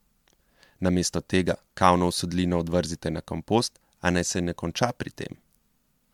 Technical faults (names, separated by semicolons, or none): generation loss